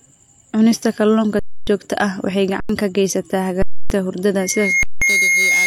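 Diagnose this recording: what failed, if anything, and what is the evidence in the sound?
The speech drops out into flat silence four times: 1.39 to 1.67 s (just before "joogto ah waxay"), 2.60 to 2.69 s (between "joogto ah waxay" and "ka geysataa"), 3.62 to 3.90 s (after "ka geysataa"), and 4.83 to 5.02 s. Each gap stops without a click, and speech was skipped during it. This is an underrun with held sample at the driver or buffer stage. The converter froze on its last value when the output buffer emptied. The 93 ms gap fits a 4096-sample buffer.

From 4.39 s to the end, a single tone near 2.2 kHz swells over roughly 0.4 s until it sits about 5 dB above the speech. This is a loudspeaker feedback squeal, an acoustic failure in the room rather than a digital one. The microphone picked up the loudspeaker it was feeding, and around 2.2 kHz the loop gain exceeded one. That frequency therefore grew by itself and kept sounding until the recording stopped.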